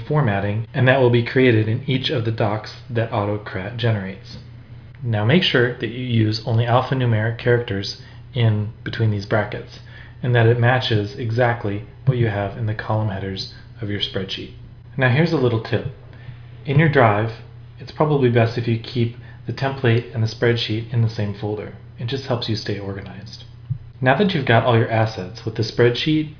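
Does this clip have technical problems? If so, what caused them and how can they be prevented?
No, the clip has no technical problems. There is nothing here that needs preventing.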